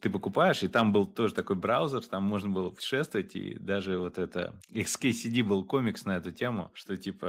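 From 0.75 to 0.82 s, just after "ты покупаешь и", the speech takes on a harsh, crackling edge. This is microphone overload: the input was likely set too high, driving peaks about 3 dB past the converter's limit, so their tops are sliced flat. On a waveform those peaks appear as flat plateaus, about 1.5 percent of samples cut off at the converter's limit. A spectrogram shows a smear of broadband energy climbing well above the voice's normal harmonics.

At 1.02 s, just before "тоже такой браузер там", the microphone volume is stepped down. Voice and background fall together by about 3 dB in one abrupt step, likely the call software cutting input gain after the distorted peak. At 2.04 s, between "тоже такой браузер" and "там можно было путешествовать", a second step lowers the level by about 1 dB more. On a waveform each step shows as a sudden narrowing of the envelope. On a spectrogram the whole frequency range, including the background floor, dims at the same instant.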